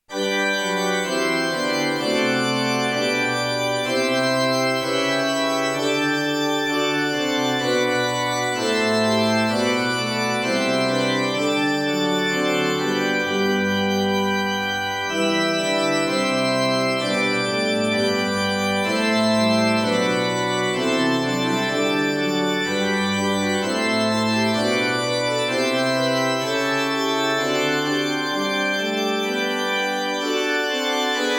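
Nothing here trips up the ear at any point; the audio just runs along steadily with no technical faults to point out.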